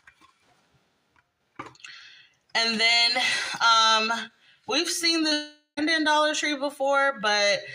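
At 5.29 to 5.33 s there's a short concealed packet loss: about 20 ms of audio didn't reach the decoder in time, and the receiver papered over it by stretching the preceding sound, so you get a quick smear rather than a gap.

Right after that, from 5.33 to 5.79 s, the sound turns into a fading synthetic continuation that thins out to silence for the last 80 ms or so before real audio resumes. That's likely a long network dropout, with the missing stretch simply skipped.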